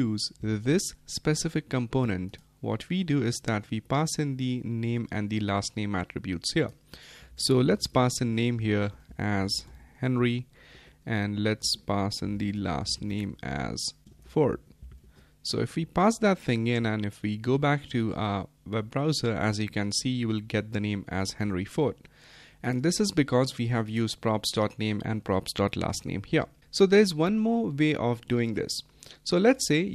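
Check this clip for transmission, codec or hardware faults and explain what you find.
No transmission, codec or hardware faults can be heard, and the signal holds steady throughout with nothing in it pointing to a problem along the chain.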